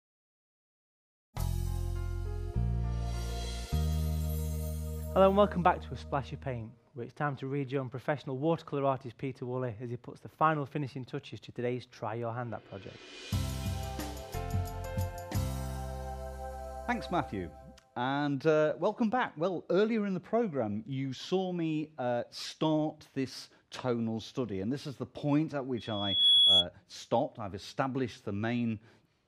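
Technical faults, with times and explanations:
25.77 to 26.66 s, loudspeaker feedback squeal: a piercing single tone near 3.4 kHz rises out of the sound over about half a second and ends up roughly 10 dB above it before cutting off after just under a second. A microphone was hearing the loudspeaker it drives, and at 3.4 kHz the round trip through amplifier, speaker and air gave back more than it received, so that frequency fed on itself and kept growing until the loop was broken.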